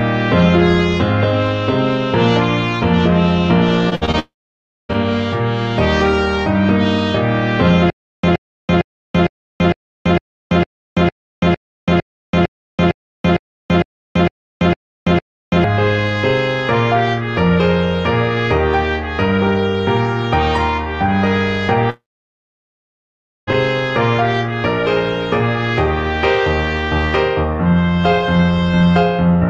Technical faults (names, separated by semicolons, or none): repeated packet loss (robotic sound); long network dropout; stutter with silent gaps